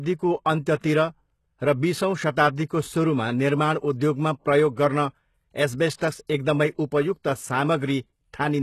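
Throughout the speech, the treble sounds synthetic rather than recorded. Nothing reaches above 12.3 kHz, and sibilants come across gritty and metallic. This is plainly audible codec damage, likely HE-AAC compression at a low rate that fits 16 kbps, with spectral band replication rebuilding the upper band from copied lower bands.

From 5.98 to 6.01 s, a brief hiss of about 31 ms leads into an attack, softening its onset. This is pre-echo: the codec spread quantisation noise across its whole transform block, so noise meant for the loud attack spilled into the quiet moment just before it.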